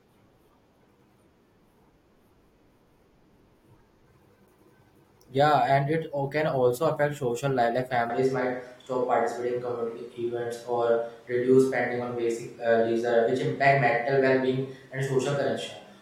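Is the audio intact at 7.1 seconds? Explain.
Yes, the audio is intact at 7.1 seconds, with no dropout, click, distortion or other technical fault at that moment.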